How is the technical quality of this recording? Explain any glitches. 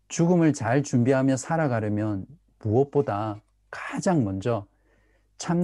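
Listening through the recording, nothing stood out as a technical problem or glitch in the speech.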